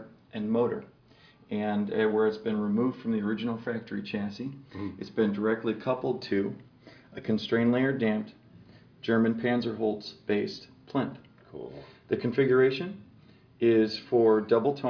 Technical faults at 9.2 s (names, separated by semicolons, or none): none